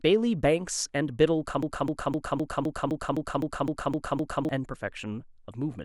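Broken-record loop from 1.63 to 4.49 s: a 257 ms speech fragment repeats 11 times back to back, likely from a stalled stream resending its last piece.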